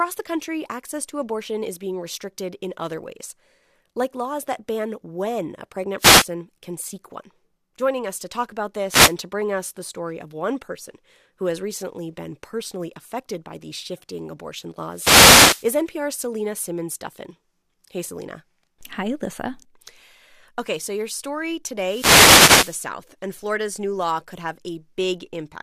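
At 5.98 to 6.27 s, a wireless microphone noise hit cuts across the speech. Another follows at 8.88 to 9.15 s. Longer ones arrive at 14.92 to 15.68 s and 21.83 to 22.87 s. Each is a swish of static. The radio link from an analogue FM microphone fades as reflected signals cancel. The receiver's own noise then rises over the voice. The last two hits last well under a second and about one second.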